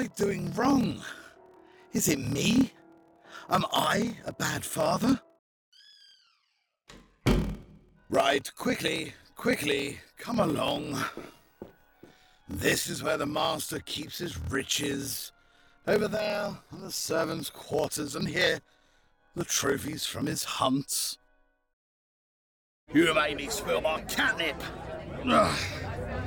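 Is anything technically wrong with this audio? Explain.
Yes, there is a block size mismatch (padded) from 0 to 20.69 s. One stage writes shorter blocks than the next reads, which fits 1024-sample blocks, and zeros fill each remainder. This adds a 38.3 Hz buzz, and the sound runs at 0.889 times normal speed, with the timbre kept.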